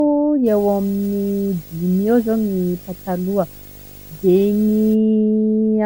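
Throughout the speech there is generation loss: a swirly, hollow, smeared quality, with consonant attacks blurred. It likely comes from about ten rounds of MP3 re-encoding, which fits a rate near 93 kbit/s. A spectrogram shows flickering holes, smudged onsets, and nothing above 20.1 kHz.

From 0.46 s to 4.94 s, video or display buzz cuts in. A screen or video cable is coupling into the audio, adding a 50 Hz buzz with hash above it at about 20 dB below the speech, plus a very high whine at 15.6 kHz. On a spectrogram this appears as a comb of 50 Hz harmonics and a thin horizontal line at 15.6 kHz.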